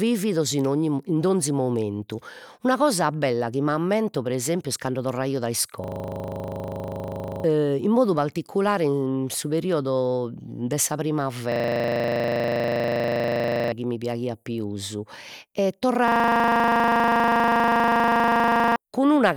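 A system hang loop at 5.84–7.44 s after "est cando torraio dai", 11.52–13.72 s before "chi mi piaghiat pius", and 16.08–18.76 s after "mi piaghiat pius e": a frozen driver recycles one 40 ms buffer, producing a 25 Hz stuttering buzz and dropping roughly 1.5, 2 and 3 seconds of speech.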